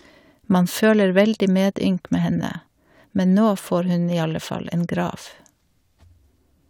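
No technical faults are audible.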